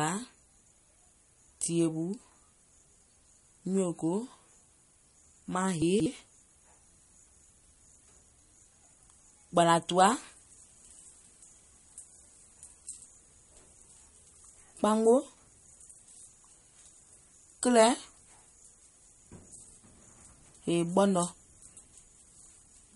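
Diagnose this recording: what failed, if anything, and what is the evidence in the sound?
A lossy encoder, most likely MP3 at a low bitrate (the damage fits roughly 48 kbps), failed at the codec stage and starved the signal of bits. The whole clip is band-limited with nothing above 11.2 kHz, and the speech has a plainly audible watery, swirling texture with smeared consonant attacks.

Chunks out of order at the buffering or network reassembly stage: blocks were played after the ones meant to follow them. At 0.6 to 0.72 s and again at 5.82 to 6.06 s the sound briefly jumbles, which fits 60 ms blocks arriving late.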